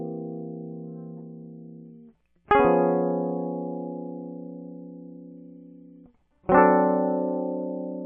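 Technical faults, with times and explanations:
Nothing stood out on listening to this music.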